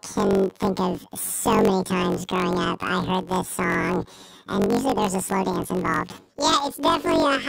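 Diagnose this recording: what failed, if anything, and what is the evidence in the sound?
The fault is in sample-format conversion: planar audio read as interleaved. Throughout the speech, the pitch sits an octave high (12 semitones) while the pace stays normal, and a flutter or buzz runs at about 46.9 Hz. Each 21.33 ms block, which fits a 1024-sample buffer, stores all left samples and then all right. Read as alternating pairs, each channel's half plays at double speed, left then right. The block-rate seams cause the flutter.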